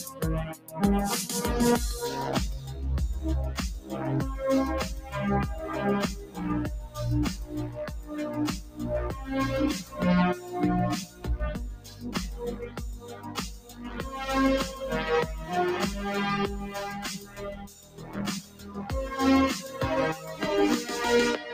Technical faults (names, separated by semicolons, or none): noise suppressor applied to music or sounds; sound cut by the noise suppressor